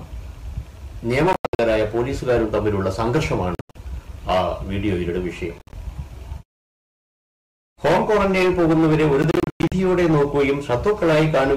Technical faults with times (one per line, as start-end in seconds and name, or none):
1.33-1.59 Bluetooth dropout
3.55-3.76 Bluetooth dropout
5.58-5.73 Bluetooth dropout
9.22-9.72 Bluetooth dropout